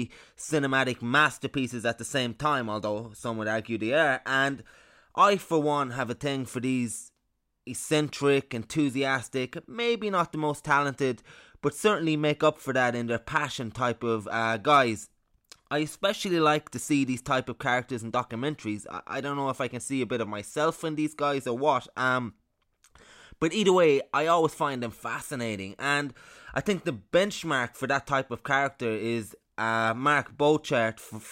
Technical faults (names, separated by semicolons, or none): none